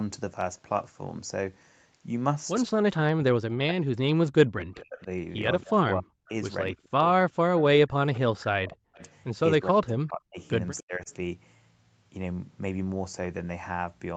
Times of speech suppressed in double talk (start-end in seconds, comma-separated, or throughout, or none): 3.17-5.10, 5.63-7.00, 7.82-9.00, 9.58-11.09